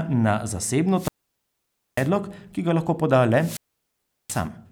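Two wireless microphone squelch dropouts interrupt the speech, from 0.94 to 2.10 s and from 3.35 to 4.48 s. Each time the FM radio link fades, static swells briefly, the receiver's squelch then mutes the output for roughly 0.89 s and 0.73 s respectively, and the voice returns.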